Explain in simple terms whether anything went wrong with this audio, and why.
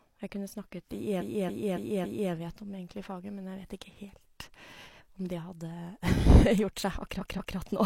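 Something went wrong with how the compressed audio was stored or sent. A stretch of it was written out more than once, a fault called repeated frames, and the player faithfully played every copy. From 1.16 to 2.28 s, a block of about 0.28 s of speech plays four extra times. From 7.16 to 7.53 s, a block of about 0.19 s plays twice more. You hear a stutter, and the recording grows by about 1.1 s and 0.37 s.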